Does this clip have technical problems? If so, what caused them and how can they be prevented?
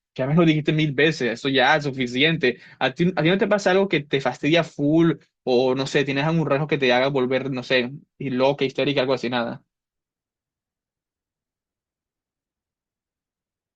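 No technical faults are audible.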